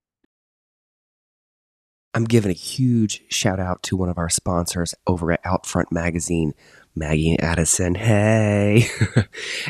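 No technical faults can be heard anywhere in the speech. There is nothing to point to at any moment and no value to report.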